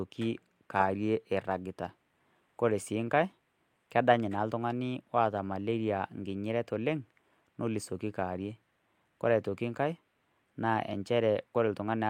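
Nothing in the speech stood out as a technical problem on listening.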